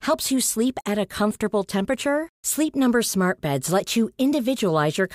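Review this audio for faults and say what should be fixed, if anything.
Nothing stood out on listening to this speech, so there is nothing to fix.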